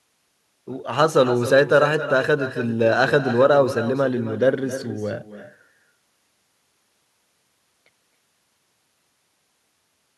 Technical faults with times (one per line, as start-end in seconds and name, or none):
0.00-10.18 echo with no canceller